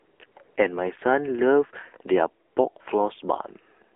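Across the whole clip the speech passes through the AMR narrowband mobile codec. The line keeps only 300 Hz to 3.4 kHz, and the buzzy, synthetic quality fits a low AMR-NB mode around 7.4 kbps. The vocal-tract model's coarse pulse coding is plainly audible throughout.

Early on, the phone stops sending speech frames and the receiver inserts AMR comfort noise from 0 to 0.20 s, 0.26 to 0.36 s and 0.44 to 0.56 s, and again from 2.48 to 2.56 s. The real background is swapped for a smooth synthetic hiss that switches in and out.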